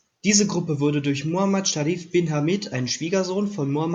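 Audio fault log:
Nothing to flag here: the speech comes through with no faults to note.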